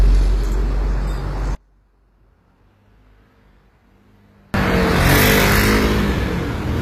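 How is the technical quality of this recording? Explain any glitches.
The recording has two faults. Lossy compression runs throughout, and one stereo channel likely flips polarity mid-clip.

From start to end, the treble sounds gritty and metallic, with nothing above 15.4 kHz. This is likely HE-AAC compression at a low bitrate around 24 kbps, with the highs rebuilt from copied lower bands.

From 1.55 to 4.54 s, one channel is likely inverted. Summed to mono, the shared sound cancels and the level drops by about 35 dB, leaving only a faint residue.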